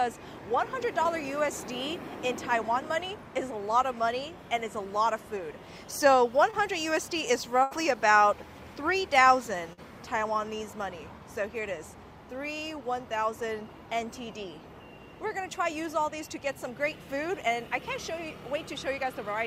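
Short concealed packet loss occurs at 1.03 to 1.07 s and again at 6.51 to 6.55 s. In each case about 20 ms of audio arrived too late for the decoder. The receiver extended the preceding sound for 11 ms and 25 ms respectively before blending back, leaving a brief smear or wobble.

A burst of packet loss follows at 7.63 to 7.73 s, where 80 ms is missing, and at 9.73 to 9.79 s, where 40 ms is missing. Concealment held the last sound for 78 ms and 46 ms while fading it, heard as a short buzz or hiss. The audio then resumes with that stretch gone.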